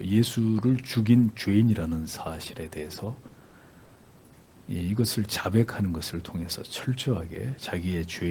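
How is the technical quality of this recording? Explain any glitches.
Technically there's one clear glitch: a stretch of repeated packet loss, heard as robotic sound, from about 2.95 to 3.91 s. A run of short holes opens up over that second, the longest about 80 ms, and each one gets patched by stretching out whatever sound came just before. Roughly 200 ms ends up filled that way, about a fifth of the stretch, so the sound goes choppy, with bits missing.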